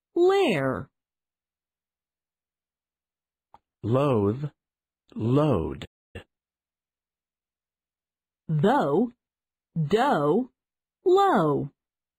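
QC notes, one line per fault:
5.85–6.16 s, playback stall: the sound halts mid-flow for about 290 ms of silence, then resumes. The likely cause is the player running out of buffered data or its thread being blocked.
6.16–9.08 s, time-compressed catch-up: after the stall the audio runs about 1.1 times fast while its pitch stays normal, because small pieces are cut out and cross-faded to shrink the backlog. A plain resampled speed-up would raise the pitch as well.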